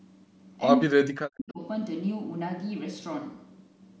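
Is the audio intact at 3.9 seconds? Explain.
Yes, the speech is intact at 3.9 seconds, with nothing there beyond the normal call microphone processing, whose high-pass filter trims only the lowest bass.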